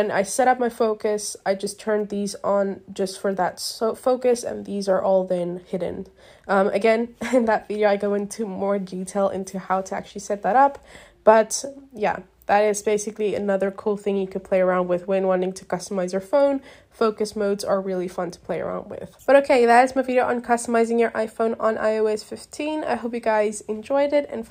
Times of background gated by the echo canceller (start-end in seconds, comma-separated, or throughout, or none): none